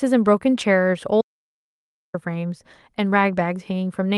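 From 1.21 to 2.14 s, an audio dropout to silence: the speech cuts to silence, likely from lost input, leaving no room tone, unlike a noise gate.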